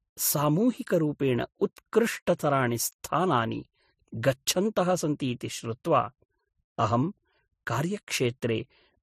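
Throughout the speech, the audio was likely passed through two lossy codecs in turn, consistent with a low-rate MP3 followed by Vorbis at a similar rate. The second encoder spends bits on the first one's artefacts, so both sets of artefacts are heard together, and nothing remains above 15.3 kHz.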